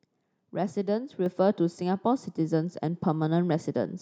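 At 1.26 s the whole recording abruptly gets louder, the speech and the background noise together, by about 4 dB, with no fade. The step comes from the microphone volume being stepped up: the calling software judged the input too quiet and raised the device's input gain in a single jump. Because the change happens at the capture stage, everything the microphone picks up rises at once.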